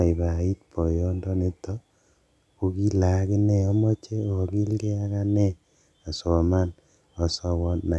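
Nothing in this bit of speech points to a technical problem; it just runs along with no glitches to flag.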